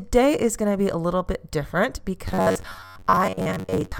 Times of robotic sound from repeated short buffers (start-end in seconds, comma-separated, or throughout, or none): 2.28-3.99